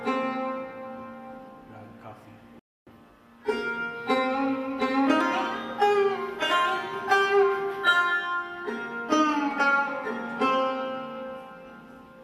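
A rebuffering stall runs from 2.59 to 2.87 s: playback exhausted its downloaded audio and halted until more data arrived. The sound drops abruptly to silence, then picks up exactly where it stopped, losing nothing but adding about 0.27 s of dead air.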